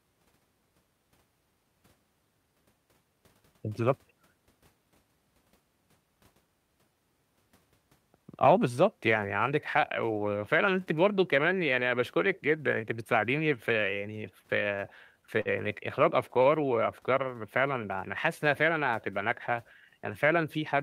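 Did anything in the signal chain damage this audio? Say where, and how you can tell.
Yes. The damage is in the network stage: two short stalls from late packets, at 15.41 to 15.49 s and 16.42 to 16.48 s. Each time a packet missed its playout slot, the jitter buffer ran dry and the receiver held the last sound, for about 47 ms and then 39 ms, until the packet arrived. Playback then resumed from the same point, so nothing is lost, but a sound is held slightly too long and playout runs that much later afterwards.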